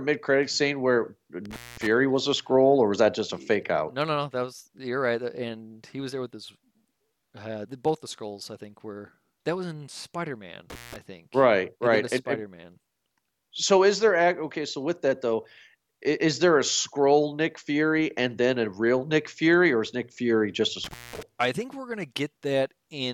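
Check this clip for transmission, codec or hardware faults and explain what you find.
The speech has three brief breaks from intermittent contact, at 1.45 to 1.87 s, 10.70 to 10.96 s and 20.84 to 21.23 s. A loose cable or plug opens for roughly 175 to 215 ms each time, so the speech cuts out with crackle at each edge and faint hiss during the gap. That crackle and residual hiss distinguish it from a digital dropout, whose gaps are clean silence.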